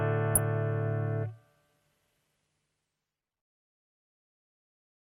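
At 0.35 to 0.38 s there's a corrupt frame decoded: a couple of compressed frames arrived with flipped bits, and the decoder played them anyway. The misread gains and codes throw energy into the wrong frequencies, so you get a short chirp, squeak, blip or burst of noise peaking around -10 dBFS.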